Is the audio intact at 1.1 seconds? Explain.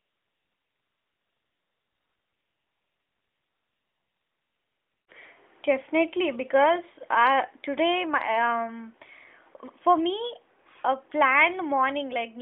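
No. From 0.0 to 5.08 s, AMR comfort noise replaces the real background: with no speech frames sent, the receiver synthesises a steady, smooth hiss from a rough level and spectrum estimate. The waveform shows a flat, even low-level band; the spectrogram shows a featureless wash.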